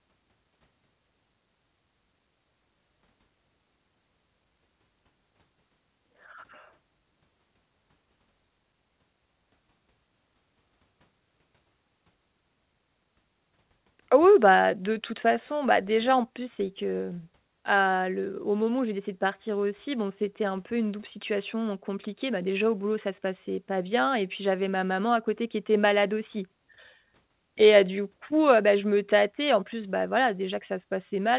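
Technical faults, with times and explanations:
No technical faults detected.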